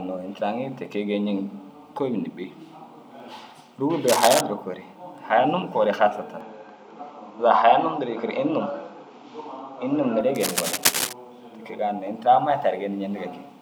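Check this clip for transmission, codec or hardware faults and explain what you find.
Two kinds of hardware fault turn up in the speech: cable scratch noise twice, and an input switched to a poorer device for several seconds in the middle.

Cable scratch noise occurs at 4.08–4.41 s and again at 10.35–11.13 s. Dense, irregular scratching bursts, roughly as loud as the speech, ride over it, likely from a worn cable or connector whose contact resistance jumped as it moved. A spectrogram shows ragged broadband smears, and the waveform shows spiky, uneven clusters.

The input switched to a poorer device from 6.41 to 10.21 s, likely a change to another microphone or a headset profile. With no gap at the switch, the speech turns duller and shifts level by about 5 dB over a faint new noise floor about 50 dB down. The spectrogram shows everything above 7.6 kHz vanishing until the original input returns.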